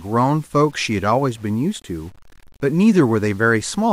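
A speech recording with a grainy, gritty distortion running through the whole clip, rising and falling with the voice rather than sitting underneath it. The likely cause is low bit depth without dither, with the signal rounded to a coarse grid consistent with 8-bit resolution, leaving error roughly 35 dB below the speech. Unlike dithered requantisation or ordinary hiss, the noise follows the signal instead of forming a steady floor.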